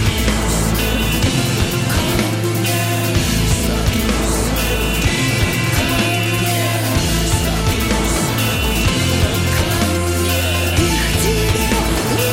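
No technical faults are audible.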